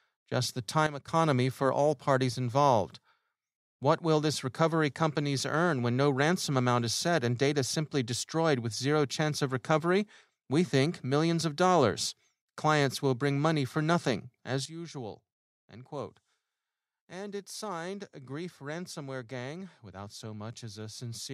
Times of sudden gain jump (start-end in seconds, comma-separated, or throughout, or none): 0.86-1.08, 14.65-21.34